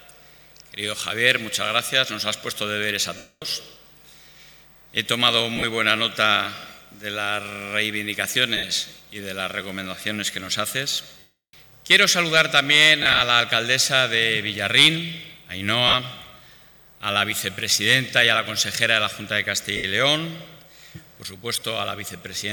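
Lost LE Audio frames at 3.17–3.43, 5.56–5.64, 8.57–8.63, 11.19–11.54, 13.03–13.21, 15.87–15.94, 19.77–19.84 and 21.54–21.62 s: the decoder refills gaps with sign-scrambled copies of the last spectrum, so instead of clean silent dropouts you hear a noisy smear that fades away over the longer losses.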